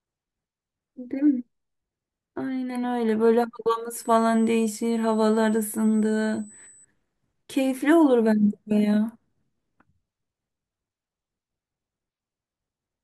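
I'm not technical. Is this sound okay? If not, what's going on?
No. USB whine, from 3.93 to 6.85 s: a steady, very high-pitched tone at 8 kHz, strongest at 16 kHz, sits under the speech. The USB connection draws power in rapid, regular bursts, and that electrical rhythm leaks into the audio as a tone.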